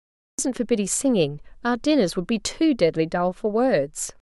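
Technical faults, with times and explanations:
0.0–0.39 s: cut-off start. The clip holds pure digital silence until 0.39 s, then the speech appears abruptly, already in the middle of a sound, with no natural attack or rise. Capture began after the talker had started, so the opening of the utterance was never recorded. Unlike a dropout, there is no sound before the silence, and unlike a slow fade-in or a late-opening gate, there is no ramp at all.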